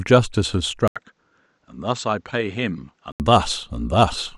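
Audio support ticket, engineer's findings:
Speech dull and quieter 0.88–3.20 s, full band after. Likely input switched to a poorer, narrower-band device. Spectrogram: nothing above 7.9 kHz, faint new noise floor. Waveform: 80 ms gap at switch, level down roughly 10 dB.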